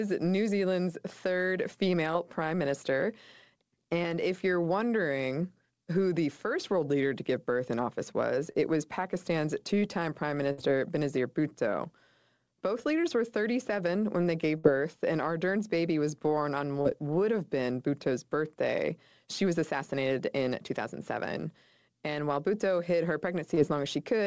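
The speech runs through a call codec. Nothing sits above 8 kHz, which fits G.722 at around 64 kbps.

At 8.52 to 8.59 s there is a short concealed packet loss. About 20 ms of audio never arrived. The receiver filled 26 ms by carrying on the last sound, then blended back into real audio. It comes across as a brief smear.

At 10.52 to 10.60 s comes a burst of packet loss. About 60 ms went missing in a row. The decoder extended the last sound for 58 ms, letting it fade. You hear a held buzz or fading hiss. Then the speech jumps ahead, with that stretch gone.

The same burst recurs at 14.58 to 14.65 s, with the same lengths and the same held, fading fill before the jump.

Two more short concealed packet losses follow. At 16.81 to 16.87 s, 40 ms was lost and 34 ms filled. It gives a quick wobble. At 23.55 to 23.59 s, 20 ms was lost and 18 ms filled. It leaves a brief smear.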